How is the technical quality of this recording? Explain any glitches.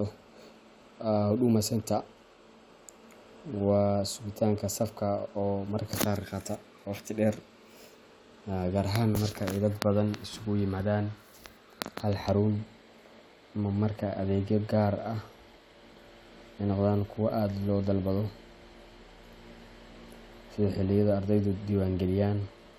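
The recording has no audible technical glitches: the speech signal stays continuous and stable throughout, with no dropouts, distortion, or other faults to explain.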